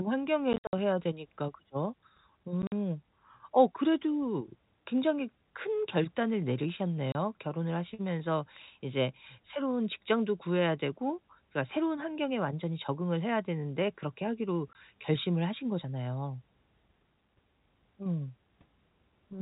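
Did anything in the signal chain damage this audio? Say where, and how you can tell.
Yes, at the network: packet loss filled with silence. Speech is cut by scattered holes at 0.53–0.73 s and 2.62–2.72 s, then at 7.12–7.15 s and 14.73–14.75 s. The holes fit 10 ms packets and are left silent, which rules out concealment, since that would bridge gaps with repeated sound.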